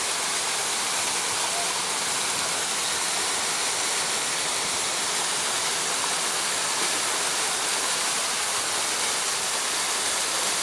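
Throughout the clip, the resampler restarted on every block, treating each 100 ms block as a separate piece of audio. The conversion, which sounds like a step down from 48 kHz to 24 kHz, loses the neighbouring samples at each block edge, leaving a small error there. The result is a steady train of ticks at 10 per second, heard only while sound is present.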